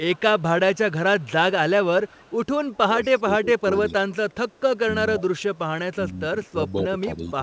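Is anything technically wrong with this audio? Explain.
Yes, two kinds of fault are present.

Echo leak at 0.13–1.29 s, 2.07–3.19 s and 6.45–6.51 s: a faint copy of the speech trails by 223 ms, likely from a loudspeaker echo the far end's canceller didn't fully remove.

Speech suppressed in double talk from 2.76 s to the end: the talker's level dips by around 15 dB at worst, likely because the canceller mistook overlapping speech for echo.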